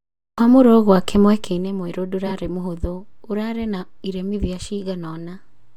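A speech clip with frames out of order from 2.26 to 2.32 s: two adjacent blocks of about 23.2 ms, consistent with 1024-sample codec frames at 44.1 kHz, play swapped, giving a brief garbled flutter. Unlike a dropout, no time goes missing.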